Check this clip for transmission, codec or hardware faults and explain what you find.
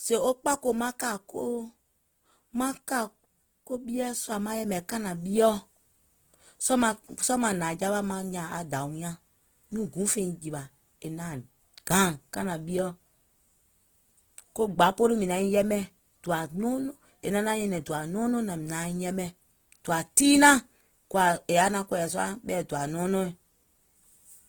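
One codec fault runs through the whole clip. Opus compression, throughout: the speech sounds grainy and rough. Starved bands are likely refilled with folded or noisy energy, fitting about 16 kbps in music mode.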